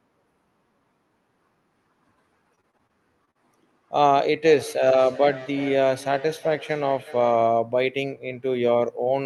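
Speech over a call link, band-limited to about 12 kHz in a way that fits Opus, with two faults. From 2.55 to 3.37 s, repeated packet loss (robotic sound) leaves seven gaps, none over 40 ms, that are patched by stretching the previous sound, making the speech choppy. From 4.46 to 7.66 s, a feedback echo between two devices in one room sends each phrase back roughly every 0.4 s, peaking at about 17 dB below the speech, thin and ringing.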